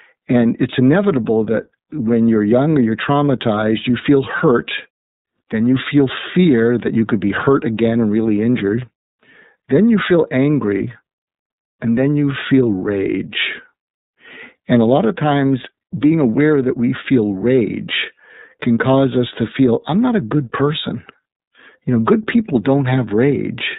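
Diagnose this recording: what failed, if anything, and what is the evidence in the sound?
The fault is at the codec stage: an iLBC codec throughout. The speech is band-limited below 4 kHz, rough and synthetic. Each frame is coded independently, which fits 30 ms frames at about 13.33 kbps.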